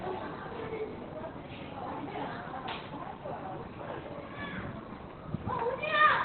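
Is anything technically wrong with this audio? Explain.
Yes. Throughout, the audio sounds muffled, hoarse and heavily damaged, with nothing above 4.3 kHz. The likely cause is Opus compression falling back to narrowband SILK mode at a rate near 12 kbps.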